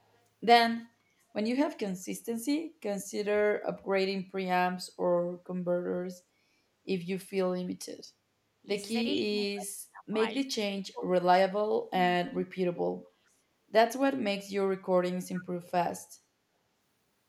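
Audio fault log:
0.13–0.18 s, echo leak: a very faint copy of the speech, roughly 40 dB below it, arrives about 432 ms late as a short scrap. It is likely residue from a far-end loudspeaker that the echo canceller failed to remove.
15.35–15.43 s, echo leak: the same 432 ms delayed copy returns, now much stronger at roughly 20 dB below the speech. The fixed delay points to the same acoustic echo path slipping past the canceller.
9.14–13.45 s, speech suppressed in double talk: the talker's level repeatedly collapses, at 9.14–10.15 s (deepest drop around 30 dB, about 0.7 s affected), 10.52–10.58 s (around 15 dB, a brief dip) and 10.92–13.45 s (around 35 dB, about 2 s affected). The speech fades and cuts out in pieces, likely because the echo canceller saw simultaneous talk and attenuated everything.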